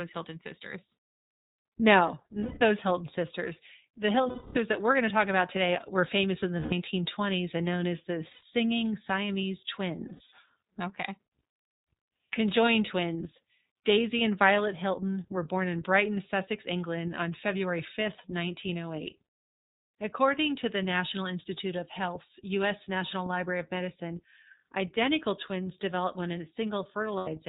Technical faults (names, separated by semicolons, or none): iLBC codec; lost iLBC frames